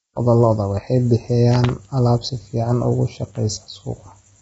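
Speech with heavy low-delay AAC compression damage running throughout. The voice sounds rough and grainy, with noise filling the gaps between pitch harmonics, and there is nothing above about 7.8 kHz. The likely cause is AAC-ELD coding at a bitrate around 16 kbps. Its short frames cannot resolve the harmonic structure finely, so the few available bits are spread thinly and quantisation noise fills the spectrum between harmonics.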